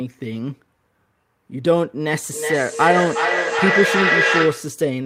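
From 2.31 s to 4.83 s the speech suffers a feedback echo between two devices. Each stretch of speech returns at a fixed interval of roughly 0.4 s, and the repeats reach about 0 dB relative to the direct speech, so they build up rather than fade. Two devices in the same room are on one call. One plays back what the other's microphone sent, that microphone captures it again, and neither echo canceller can remove audio played by the other device.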